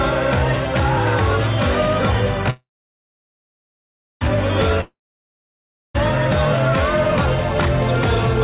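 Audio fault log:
2.50–4.23 s, call audio freeze: the music halts and its last sound is stretched into a fading buzz, then 1.56 s of silence. Playback resumes exactly where it stopped, 1.71 s late, with nothing lost, likely because delayed packets emptied the jitter buffer.
4.81–5.96 s, long network dropout: the last sound decays as a brief buzz into 1.0 s of silence, and the music returns further on with 1.14 s skipped. This likely reflects packets that never arrived. Both fills carry the muffled, 4 kHz-limited tone of the G.711 A-law call path.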